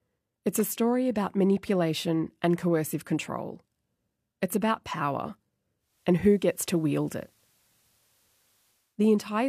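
At 5.77 s the receiver falls back from digital to FM, a digital radio blending to analogue, cross-fading over about 0.33 s, then returning at 9.02 s. During the FM stretch a faint hiss rises, roughly 40 dB under the programme, and the level shifts by about 1 dB. On a spectrogram a grey noise floor fills the gaps; the waveform shows a slight step in height.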